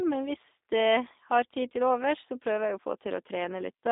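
G.729 coding runs throughout. The speech is limited to 250 Hz to 3.7 kHz. Its sparse-pulse rebuild, fitting 8 kbit/s, sounds plainly rough and synthetic.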